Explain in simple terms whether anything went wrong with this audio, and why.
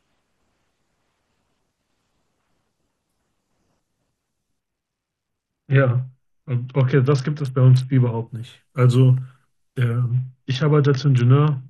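The wireless Bluetooth link got congested, so the phone cut the audio data sharply, a Bluetooth SBC bit pool drop, from 4.60 to 8.28 s and again from 10.09 s to the end. The speech loses its crisp top end and turns dull and gritty until the data rate recovers.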